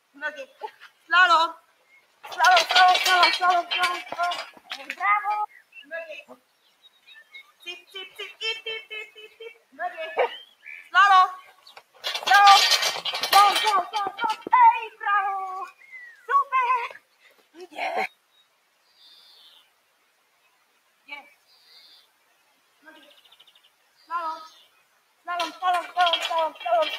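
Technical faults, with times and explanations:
Throughout: noise suppressor applied to music or sounds. Level pumps and thins by around 10 dB because a speech-tuned suppressor treats steady tones and tails as noise.
0.01–2.27 s, 4.45–8.41 s, 9.08–9.77 s, 10.45–12.05 s, 14.38–15.02 s, 15.67–16.29 s, 16.91–25.27 s: sound cut by the noise suppressor. Sustained parts sink by up to about 17 dB (about 14 and 16 dB at 14.38 and 15.67 s) as the suppressor mistakes them for noise.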